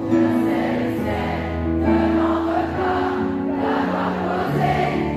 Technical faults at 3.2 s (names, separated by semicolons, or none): none